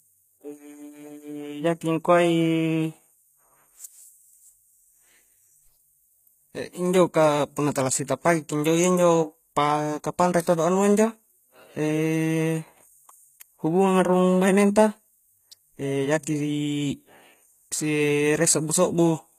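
A low-bitrate encoder likely applied HE-AAC compression throughout, rebuilding the treble by copying lower bands upward, so sibilants sound gritty and metallic, with nothing above 14.9 kHz.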